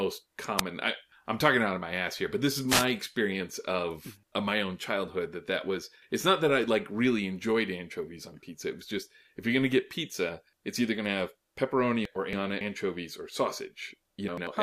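Wireless microphone noise hits occur at 0.57 to 0.61 s and 2.67 to 2.86 s. The radio signal faded as reflections cancelled, so receiver noise surged into brief swishes of static over the speech. Frames out of order occur at 12.05 to 12.61 s and 14.28 to 14.47 s. Neighbouring blocks of about 279 ms and 93 ms played swapped, giving a garbled flutter.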